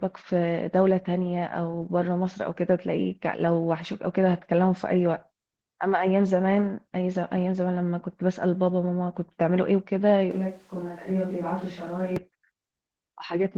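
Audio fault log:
Throughout: Opus voice compression. The speech is plainly coded, with a hoarse, slightly robotic texture and muffled detail. The sound fits Opus in hybrid mode near 16 kbps: linear prediction handles the band below 8 kHz, and a thin transform layer covers the highs, and at this low rate the excitation is coarsely quantised.
10.31 to 12.16 s: switch to a distant microphone. The speech abruptly turns roomy and hollow, loses bass, drops about 5 dB, and carries room noise roughly 30 dB below it, then snaps back. The likely cause is a fallback from the close microphone to one further away.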